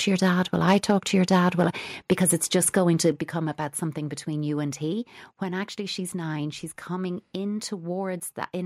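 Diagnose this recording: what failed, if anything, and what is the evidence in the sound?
Microphone overload shows up three times, at 0.23 to 1.66 s, 2.11 to 2.31 s and 2.76 to 3.1 s. The loudest speech peaks carry a harsh, crackling edge. The first stretch is the worst, with peaks driven about 6 dB past the converter's limit, then about 4 dB and about 2 dB. Only a small share of samples are flattened, at most around one or two percent. The likely cause is input gain set too high, so the converter clips the tops of the peaks.

A microphone volume step-down follows twice. At 2.13 s, inside the second overload, the level falls by about 2 dB. At 3.12 s, just after the third, it drops by about 6 dB. Speech and background fall together, in a single step rather than a fade. That points to the call processing stage. Its automatic gain control likely detected the clipping and cut the device's input volume to stop it.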